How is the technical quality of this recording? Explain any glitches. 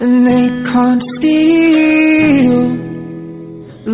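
No glitches or technical faults can be heard anywhere in the recording; the signal stays steady and intact throughout.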